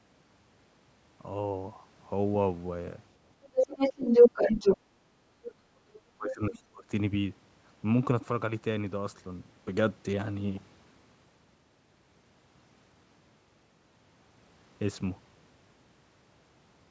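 From 3.43 to 4.77 s a second voice can be heard under the talker, at times about 10 dB above the talker. This is the other side's voice leaking through: the far end was played on a loudspeaker, picked up again by the microphone, and likely not fully removed by the echo canceller.

While the far side is playing as the talker speaks, the talker's own speech dips. At 4.53 to 4.59 s the drop is slight, around 5 dB. At 4.78 to 4.87 s the dip is sharper, roughly 15 dB. From 5.04 to 6.87 s the talker's speech is turned down in pieces by as much as about 20 dB, for roughly a second and a half in total. This is speech suppressed in double talk. With both sides talking at once, the echo canceller likely could not tell the talker apart from the echo and pulled both down.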